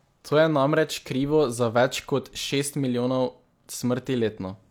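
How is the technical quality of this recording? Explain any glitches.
Nothing here sounds like a glitch, and the recording holds together without any dropouts, clicks or other technical hiccups worth pointing out.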